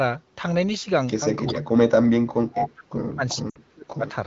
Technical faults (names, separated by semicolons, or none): echo leak; speech suppressed in double talk; lost AMR speech frames